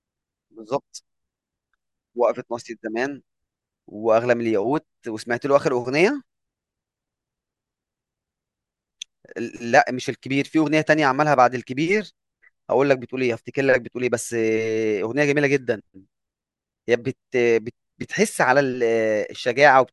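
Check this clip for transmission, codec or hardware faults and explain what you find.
Nothing stood out on listening to the speech in this clip.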